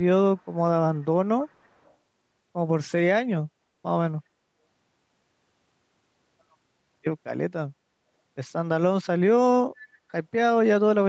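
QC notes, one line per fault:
0.37–0.46 s, 1.01–1.05 s and 1.41–1.94 s, echo leak: a faint, delayed copy of the speech surfaces in three scraps, trailing the original by about 0.3 s. The first two are very quiet, about 40 dB down, and the longest, from 1.41 s, is a little stronger at about 35 dB down. This is likely a far-end loudspeaker whose echo canceller let part of its microphone pickup through and sent it back.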